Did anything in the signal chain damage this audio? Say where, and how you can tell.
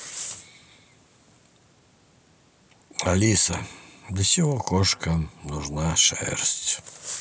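No, nothing in the signal chain has left a mark on this speech recording. No stage from capture to playback shows audible damage at any point in the clip.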